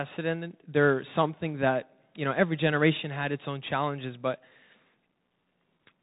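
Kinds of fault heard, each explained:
Bluetooth CVSD headset codec: The speech passed through the narrowband headset link, where each sample is coded as a single up-or-down bit at 64 kbps and the step size adapts to follow the waveform. Content is cut off above about 3.8 kHz, so the speech sounds boxed and telephone-like. Strong high-frequency energy outruns the step size and distorts, s sounds come out scratchy, and a granular hiss sits under the speech, leaving the codec damage plainly audible.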